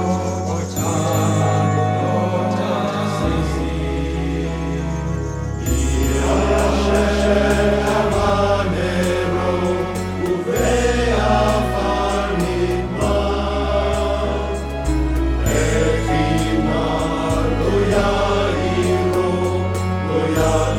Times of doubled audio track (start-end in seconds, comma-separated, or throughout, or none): 0.00-8.30